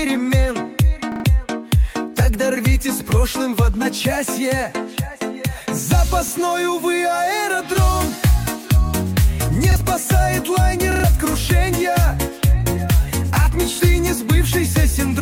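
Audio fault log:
1.12–13.80 s, repeated buffer: the same short slice of sound plays again with a hard join at each restart, at 1.12–1.24, 6.28–6.32, 9.72–9.76, 10.92–11.04 and 13.76–13.80 s. Each slice lasts 40 ms, which fits a 40 ms playback buffer. New audio arrived late, so the device replayed the last block. Single repeats give a brief buzzy click. The triple repeats at 1.12 and 10.92 s stutter for about a tenth of a second and drop that much of the sound.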